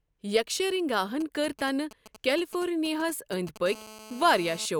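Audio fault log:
1.21–3.58 s, GSM signalling bursts: a nearby 2G handset sends only brief groups of radio bursts, which the audio circuitry rectifies into a galloping dit-dit-dit of short 217 Hz buzzes, sitting roughly 20 dB below the speech.
3.66–4.66 s, GSM phone buzz: the handset now transmits continuously at 217 bursts per second, as in an active call. The rectified pulses give a steady, raspy 217 Hz buzz rich in harmonics, unrelated to the speech, about 18 dB below it.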